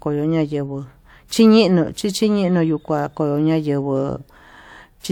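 Speech clip with pre-echo from 1.28 to 1.31 s: a 29 ms hiss leads into an attack because a transform codec spread one block's quantisation noise across the quiet moment before it. A spectrogram shows a broadband smear ahead of the onset, and the waveform shows noise preceding it.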